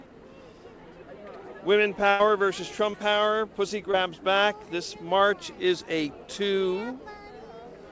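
From 2.10 to 2.21 s there is a burst of packet loss. About 100 ms of audio never arrived, and the receiver stretched the last sound into a held, fading tail before jumping ahead. Unlike a brief glitch, it leaves an audible gap in continuity.

At 2.91–2.95 s and again at 3.91–3.95 s, short concealed packet loss covers about 20 ms each time. The patched-in continuation blends back quickly, so these read as small smears or wobbles rather than a dropout. Above them, content stops near 8 kHz, as expected from a wideband call codec.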